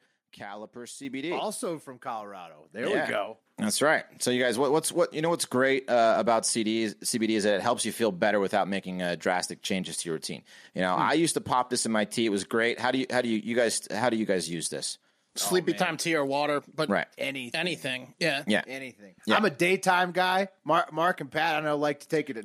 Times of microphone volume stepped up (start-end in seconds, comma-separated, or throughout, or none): 1.05, 3.09